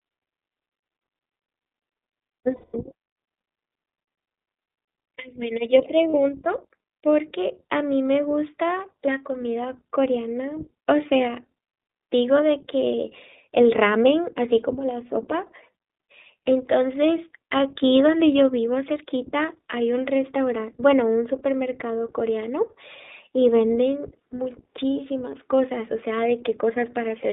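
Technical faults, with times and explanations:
Throughout, iLBC codec: the speech was squeezed through a narrowband VoIP codec at 15.2 kbps, which fits 20 ms frames coded independently, with the line band running from 250 Hz to 3.7 kHz. Everything above it is gone, leaving a muffled, plainly rough and slightly synthetic timbre.
2.56–2.75 s and 6.10–6.15 s, lost iLBC frames: packets went missing, about 180 ms at the first point and 40 ms at the second, and the decoder filled each gap by repeating the last pitch cycle mixed with noise. It sounds like a briefly held, buzzy vowel, with the speech recovering almost immediately after.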